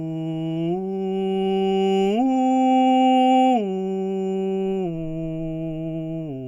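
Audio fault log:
No faults can be heard anywhere in this music.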